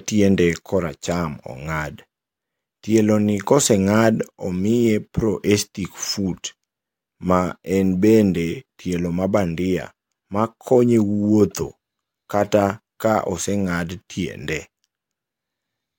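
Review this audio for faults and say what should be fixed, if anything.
No faults found; nothing to fix.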